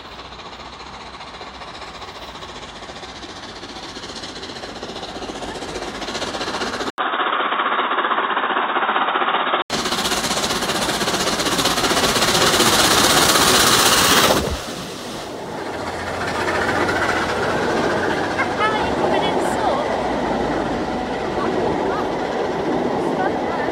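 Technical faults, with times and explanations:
6.90–9.70 s, input switched to a poorer device: the recording path likely changed over to a narrower-band input, such as a headset's call profile, then returned at 9.70 s. An 80 ms gap of silence marks the changeover. For those few seconds the band narrows, so the sound turns dull and boxy. A new, faint background noise, roughly 35 dB under the signal, sits beneath it. The loudness stays about the same.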